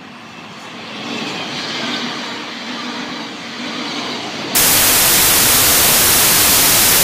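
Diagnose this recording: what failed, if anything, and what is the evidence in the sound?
Samples built from the wrong bytes, from 4.55 s to the end at 7.03 s: a sample-format conversion fault. The reader misassembles each sample's bytes, so the fast-changing low bits dominate and the sound turns into loud, harsh broadband noise.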